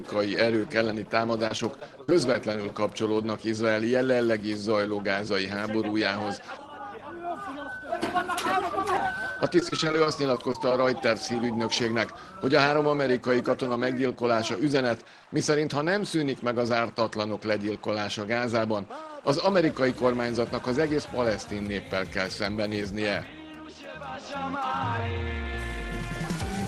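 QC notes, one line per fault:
1.47–2.55 s: repeated packet loss (robotic sound). Short dropouts up to about 40 ms keep getting patched by stretching the previous sound, so it turns choppy.
9.32–10.71 s: repeated packet loss (robotic sound) again. A denser run of gaps, each up to 40 ms, is filled with repeated audio, giving the same robotic, broken-up texture over the Opus call codec.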